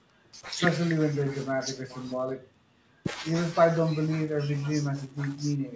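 No faults are present in this speech clip; it carries the ordinary call microphone processing, with its high-pass trimming the deepest bass and nothing above 8 kHz.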